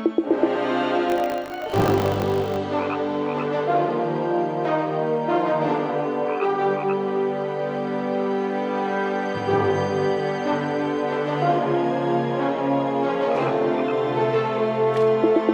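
From 1.08 to 2.56 s the sound takes on a hard, robotic buzz at 50 Hz, a steady rattle riding on the audio that stops when the stretch ends. This is buffer tearing. The program filling the ring buffer and the hardware reading it have drifted so their positions cross once per period, which fits a 20 ms buffer. In each period a small sliver, a few percent, replays audio from roughly 70 ms earlier, butted against current audio with a hard join on each side.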